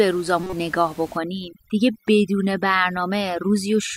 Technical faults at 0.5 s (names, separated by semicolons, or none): corrupt frame decoded